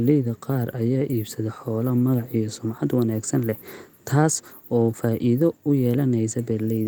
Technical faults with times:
none

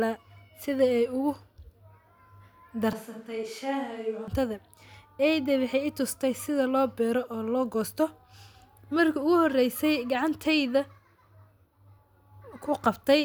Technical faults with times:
2.93-4.28 switch to a distant microphone

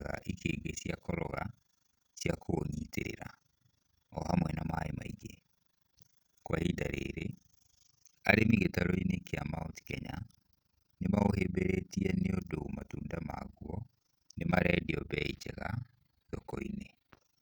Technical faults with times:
0.00-17.41 overlap-add ripple

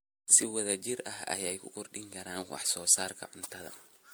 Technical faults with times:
0.00-4.14 generation loss

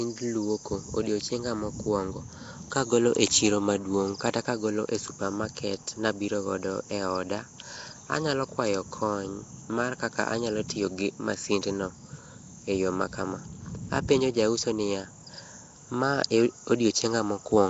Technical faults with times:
0.00-17.69 Nellymoser compression

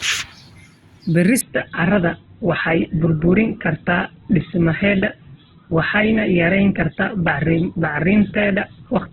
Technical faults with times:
1.41-9.12 adaptive stream at a lower bitrate

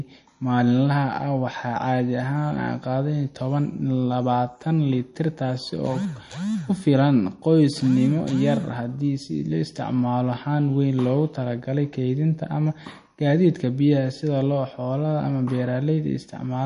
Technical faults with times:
0.00-16.66 MP3 compression

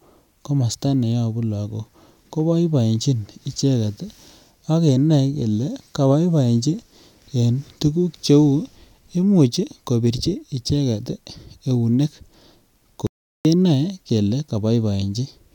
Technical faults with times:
13.07-13.45 audio dropout to silence

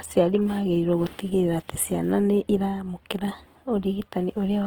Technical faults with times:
0.00-4.66 Opus compression

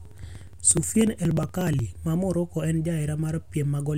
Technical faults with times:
0.05-1.79 periodic USB or driver dropouts

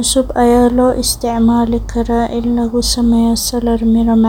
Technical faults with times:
none

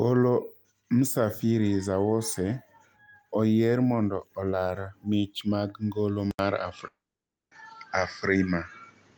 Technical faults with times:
6.31-9.17 input switched to a poorer device
6.87-7.53 long network dropout

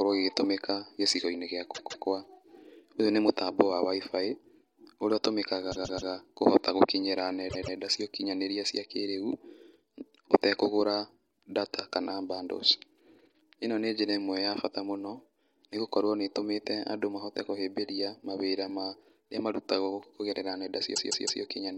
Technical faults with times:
1.74-2.05 repeated frames
5.71-6.10 repeated frames
7.49-7.75 repeated frames
20.94-21.41 repeated frames

